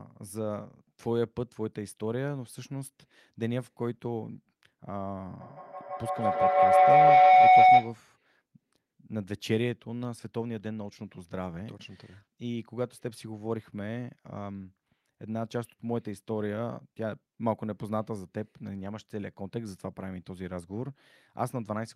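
From 5.4 s to 8.05 s, a microphone-to-loudspeaker loop runs with more than unity gain, so each pass returns louder than the last and the sound builds into feedback howl. The repeats narrow to the pitch the loop favours, a tone of roughly 700 Hz, pulsing about every 150 ms as it circulates. At its peak the howl sits about 14 dB above the speech and swamps it, then stops abruptly at 8.05 s when the loop is broken.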